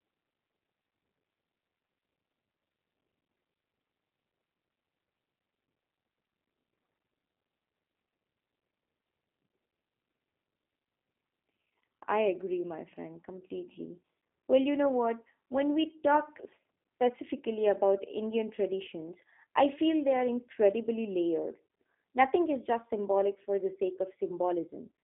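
Speech carried through a G.729 codec for the whole clip: the band is narrow and the voice sounds rough and buzzy, with synthetic pulse-excitation artefacts that a plain telephone band-limit wouldn't add.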